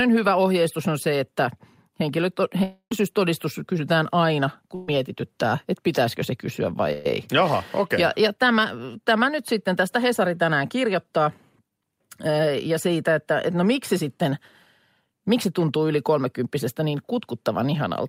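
Speech with three gaps where the signal stops arriving and the receiver papers over the hole. From 2.63 to 2.92 s, about 280 ms of audio is lost. The last sound is stretched into a fading buzz or hiss for most of that span, and then it decays into roughly 80 ms of outright silence before the speech picks up further on. That is most likely a long network dropout. What separates it from the shorter losses is both its length and the fact that the concealment runs out and leaves true silence, rather than bridging the whole gap.

The other two are bursts of packet loss, at 4.75 to 4.88 s and at 6.92 to 7.10 s. Each loses about 120 ms, and each is filled with about 125 ms of the preceding sound held and faded as a buzz or hiss. No silence opens up in either one, so the audio jumps straight ahead once the fill ends. In the second burst, a further sliver of about 14 ms is also cut out.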